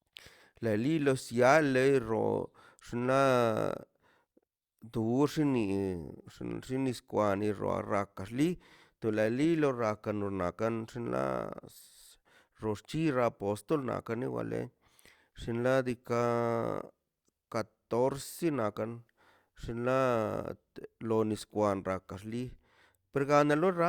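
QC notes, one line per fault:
No faults found in the speech recording; nothing to log.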